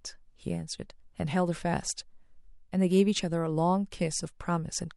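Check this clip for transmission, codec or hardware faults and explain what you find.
No faults can be heard.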